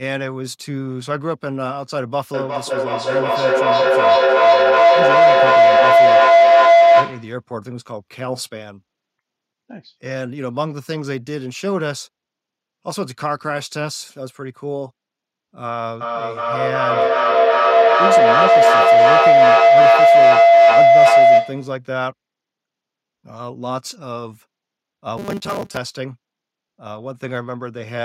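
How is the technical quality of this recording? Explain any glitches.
The recording has clear technical problems: two bursts of feedback howl and one short stretch of robotic buzz.

Feedback howl, 2.34–7.45 s and 16.01–21.81 s: a microphone-loudspeaker loop builds a tone near 700 Hz, up to about 14 dB above speech, pulsing roughly every 0.4 s. On a spectrogram it is a bright horizontal band.

Robotic sound from repeated short buffers, 25.18–25.77 s: a rigid metallic 200 Hz buzz, likely from 5 ms chunks repeated, with about half the audio replaced. A waveform shows identical repeating cycles.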